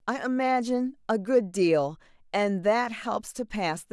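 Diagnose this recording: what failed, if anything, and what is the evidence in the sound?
Listening closely to the speech recording, nothing stood out that would point to a failure anywhere in the chain.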